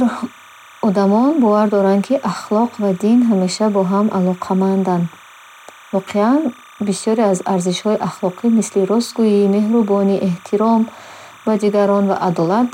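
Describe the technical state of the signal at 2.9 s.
Timecode bleed is present at 2.9 s, as it is throughout the clip: linear timecode running at 29.97 frames per second leaks in from a neighbouring line, its square wave flipping between tones near 1 and 2 kHz, giving a steady chirping warble roughly 25 dB beneath the speech.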